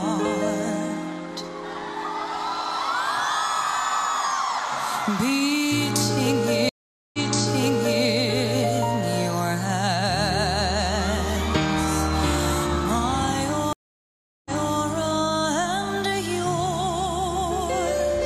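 Stream reconnect at 6.69 s and 13.73 s: the connection dropped, leaving 443 ms and 725 ms of silence. A fresh decoder then resumed 929 ms and 325 ms early, repeating resent audio.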